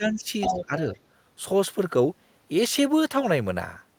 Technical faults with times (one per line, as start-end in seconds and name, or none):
0.00-0.75 speech suppressed in double talk
0.41-0.66 other side's voice leaking through